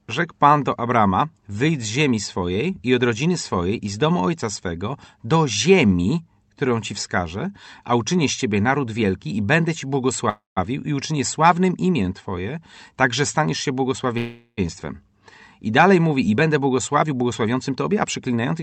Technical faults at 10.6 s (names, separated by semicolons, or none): call audio freeze